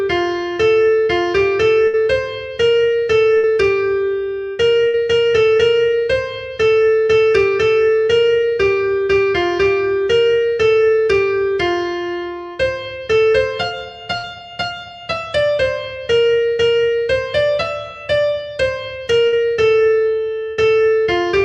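Bursts of packet loss occur at 1.87, 3.37, 4.87, 14.17 and 19.27 s. Each time, about 60 ms of audio never arrived. The receiver stretches the last sound and lets it fade over roughly 0.05 to 0.06 s. Then the audio jumps ahead, skipping the lost stretch.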